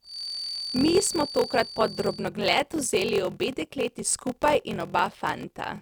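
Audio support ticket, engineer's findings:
Block size mismatch (padded), whole clip. Steady buzz near 43.1 Hz. Speech runs slow, about 0.861x, at roughly normal pitch. Buffer handoff between stages. Writer fills short blocks, reader pads each to what fits a 1024-sample read with zeros. Gap every block.

Feedback whistle, 0.0 to 2.32 s. Thin steady tone at 4.6 kHz, well below the speech, swelling and fading slowly in level. Likely speaker-to-mic acoustic loop sitting at the edge of feedback. One frequency rings on without building up.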